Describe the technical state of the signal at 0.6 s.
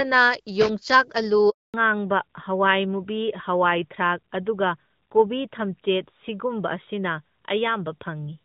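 At 0.6 s there is a loose connector crackle, running from 0.61 to 0.69 s. A worn or dirty contact in the signal path is briefly making and breaking as it shifts. Each break chops the speech. Any DC on the line turns those breaks into pops. The result is a short, irregular burst of scratchy crackle laid over the speech. It lasts about 80 ms. The underlying HD Voice band-limiting, consistent with AMR-WB at around 12.65 kbit/s, is present beneath it.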